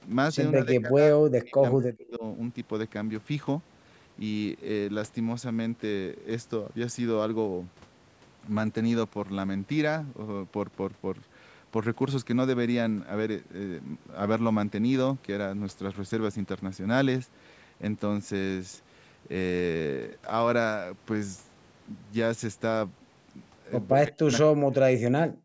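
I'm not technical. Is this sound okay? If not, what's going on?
No. The voice gets pushed down almost to silence from 0.55 to 2.24 s, 23.91 to 24.32 s, and 24.49 s to the end. This is speech suppressed in double talk: likely both people spoke at once, and the call's echo control mistook this voice for echo.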